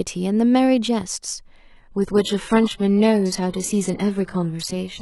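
Adaptive stream at a lower bitrate, from 1.59 s to the end of the clip: the speech suddenly becomes rougher, with more codec artefacts. This is the player switching to a much cheaper encoding when the connection slowed, and the sound fits a drop from roughly 96 kbit/s AAC to about 12 kbit/s HE-AAC. The change is abrupt, with no gap.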